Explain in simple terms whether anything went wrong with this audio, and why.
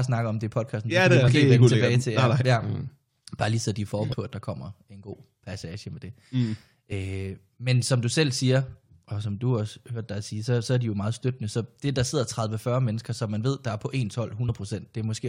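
Damaged data in a compressed stream: parts of the file were corrupted, so the decoder briefly lost its place, causing short chirps or blips at 1.27 s (after "det det er"), 4.12 s (before "på at der kommer"), 6.91 s and 14.48 s (after "ved der er på").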